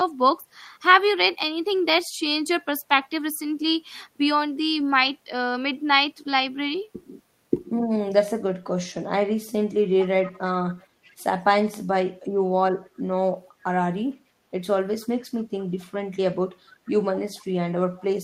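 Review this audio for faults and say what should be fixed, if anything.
Echo leak at 10.01–10.39 s, 10.77–11.24 s, 15.01–15.07 s, 15.79–15.84 s, 17.34–17.43 s and 17.98–18.05 s: a faint, delayed copy of the speech trails in about 463 ms behind the original, roughly 20 dB down in the first burst and about 30 to 35 dB down elsewhere. This is likely a far-end loudspeaker whose sound reached its microphone and slipped past an echo canceller that had not fully converged. To prevent it, the far end should use a headset or give its echo canceller stronger residual-echo suppression.

Speech suppressed in double talk at 12.35–12.42 s: the voice briefly sinks by about 25 dB for roughly 70 ms, a short bite taken out of the speech. The likely cause is both sides talking at once, with the echo canceller mistaking the local talker for loudspeaker echo and pulling the whole signal down. To prevent it, the canceller's double-talk detection should be tuned so it holds back attenuation when near-end speech is present.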